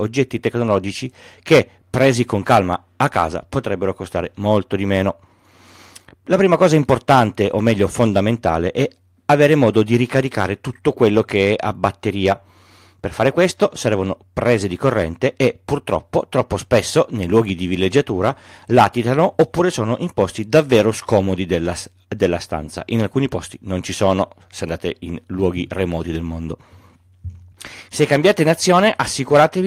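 No audible faults anywhere in the speech.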